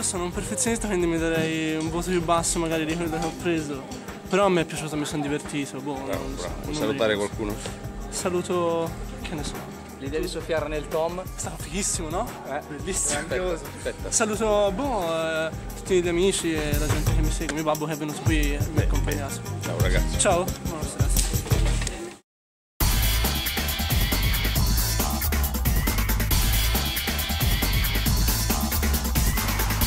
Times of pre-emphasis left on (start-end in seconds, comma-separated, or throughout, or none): 21.05-29.87